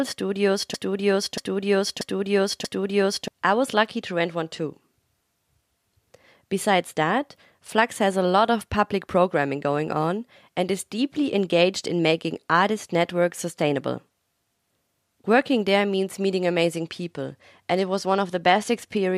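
From 0.74 to 3.28 s, a broken-record loop repeats one 0.63 s fragment four times before "I was lucky to", likely from a stalled stream resending its last buffer. After "there means meeting", 16.76 to 18.97 s brings a Bluetooth SBC bit pool drop: dulled treble and gritty noise, consistent with the bit pool roughly halving to around 108 kbps.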